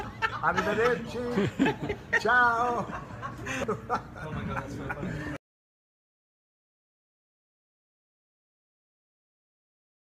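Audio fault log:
5.08 s, lost LE Audio frames: about 15 ms of the sound briefly turns into a noisy smear. That fits two dropped Bluetooth frames, which the LC3 decoder patched by replaying the last spectrum with scrambled signs, so what's heard is noise-like rather than a clean gap.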